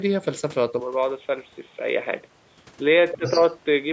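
A speech recording in which the input at 0.8 s likely switched to a poorer device, such as a headset's call profile, which stays in use to the end. The sound abruptly turns duller and boxier, drops a few decibels in level and gains a faint new noise floor, with no gap at the switch. From 3.12 to 3.4 s the other side's voice is leaking through, likely because the talker's device played the other side on a loudspeaker and the echo canceller left a residue in the microphone. A second voice sits well below the talker for that short stretch. Within that overlap, from 3.17 to 3.25 s, the talker's speech is suppressed in double talk, likely because the echo canceller could not separate the two voices and turned everything down. The voice dips sharply, by roughly 15 dB at its deepest, for about 70 ms.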